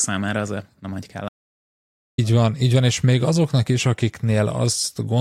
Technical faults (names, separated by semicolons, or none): audio dropout to silence